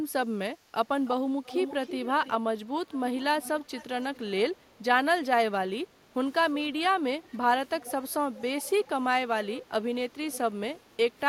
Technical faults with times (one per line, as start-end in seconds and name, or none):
1.05-1.11 echo leak
1.44-2.31 echo leak
2.87-3.01 echo leak
3.42-4.60 echo leak
7.23-7.38 echo leak
7.80-8.89 echo leak
9.50-9.60 echo leak
10.33-10.38 echo leak